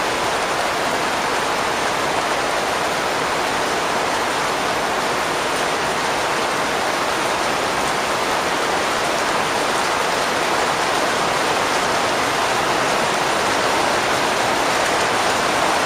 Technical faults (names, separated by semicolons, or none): clock drift buffer slips